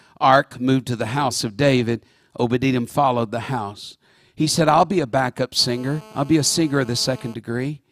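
From 5.59 to 7.34 s, a nearby 2G handset on a call couples its radio bursts into the audio circuitry, where they are rectified into an audible signal: GSM phone buzz. The transmitter pulses at 216.7 Hz, so the speech picks up a hard, raspy buzz at that rate, dense with harmonics and unrelated to the talker. Because the phone is mid-call, the buzz holds steady throughout, sitting about 24 dB below the speech.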